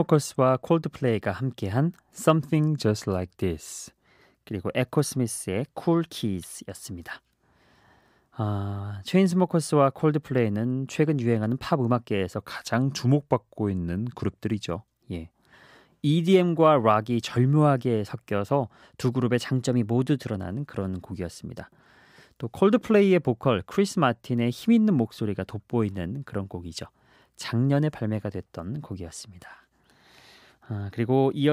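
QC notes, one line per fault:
2.39–4.07 s and 12.38–14.68 s, drift correction step: a clock-matching resampler likely dropped the playback rate in one jump to refill its buffer, slowing the speech by 6.24% and lowering pitch about 112 cents, roughly a semitone, before snapping back to normal speed.
19.46–20.35 s, drift correction step: the rate was likely stepped the other way to drain the buffer, so the speech runs 6.24% fast and sits about 105 cents sharp, a sudden semitone rise in pitch and tempo that ends abruptly.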